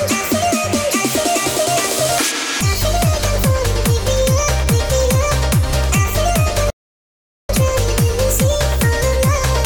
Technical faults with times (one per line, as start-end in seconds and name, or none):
6.70-7.49 playback stall